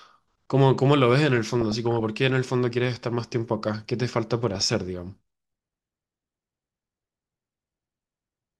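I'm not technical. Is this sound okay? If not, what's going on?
No, there's DAB burbling at 1.33 to 2.04 s and again at 4.55 to 4.73 s. Weak digital radio reception let data errors slip through, so parts of the speech get short blips of noise over the top.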